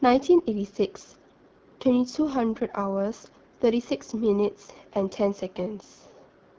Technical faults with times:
0.00-6.59 AMR wideband (HD Voice) codec

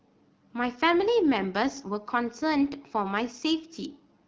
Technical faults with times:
none

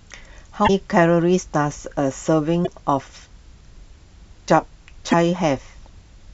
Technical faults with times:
0.64-0.70 damaged data in a compressed stream
2.63-2.68 damaged data in a compressed stream
5.08-5.14 damaged data in a compressed stream

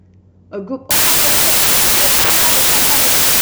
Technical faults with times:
0.91-3.42 wrong sample width

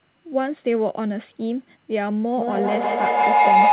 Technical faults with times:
2.37-3.72 feedback howl

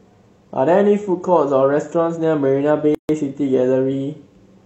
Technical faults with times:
2.95-3.09 gap at a join of encoded pieces

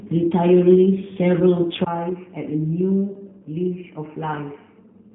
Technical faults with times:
0.00-5.14 G.729 codec
1.84-5.14 input switched to a poorer device

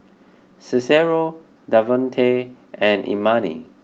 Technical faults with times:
none

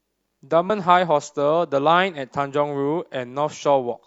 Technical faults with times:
0.65-0.70 damaged data in a compressed stream

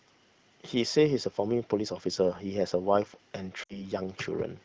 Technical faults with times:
3.63-3.81 lost AMR speech frames

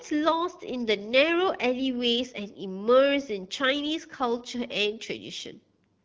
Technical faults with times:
none

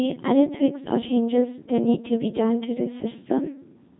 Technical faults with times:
0.00-4.00 Codec 2 vocoder

